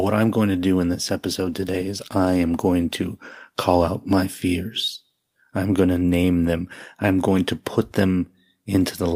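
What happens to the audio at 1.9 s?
At 1.9 s, a call bitrate drop runs from 1.17 to 5.17 s. Bits fall from 64 to 27 kbps. Speech sounds coarse and muffled.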